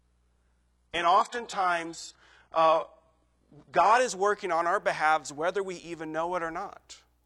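For the first four seconds, up to 4.0 s, the speech sits on the thin low rung of an adaptive stream starting at a low bitrate. The treble is missing or faked, which fits an HE-AAC stream at around 12 kbit/s, and the codec artefacts are stronger. Right at 4.0 s, just before "is working on our", it jumps cleanly to something like AAC-LC at 96 kbit/s with no gap. After that the top end fills back in, reaching about 11.5 kHz.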